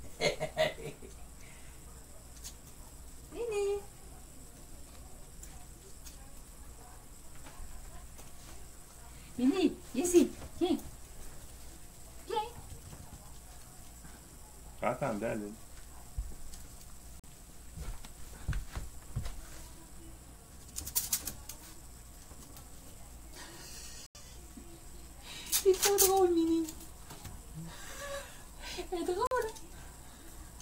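At 17.20 s, 24.06 s and 29.27 s the sound drops into blocks of digital silence, about 43 ms, 85 ms and 43 ms long, which fits 2048- and 4096-sample chunks at 48 kHz going unfilled. Each hard cut leaves a short hole.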